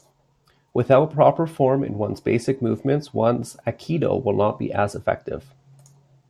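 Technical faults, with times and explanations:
No technical faults can be heard in this speech clip.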